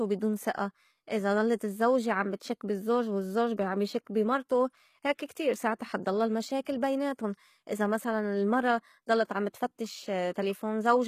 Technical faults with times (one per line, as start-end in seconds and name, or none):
0.00-11.07 HE-AAC compression